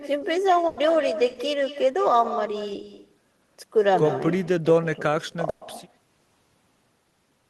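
Echo with no canceller runs through the whole of this speech clip: a copy about 11 dB quieter trails every phrase by roughly a fifth of a second, sounding thinner, because the far end's loudspeaker is feeding its microphone and nothing removes it. A burst of packet loss hits at 0.67 to 0.79 s and again at 5.49 to 5.63 s. Each time, the receiver stretched the last sound over the gap, 100 ms and then 120 ms, letting it fade, and the audio resumed with that stretch of speech gone.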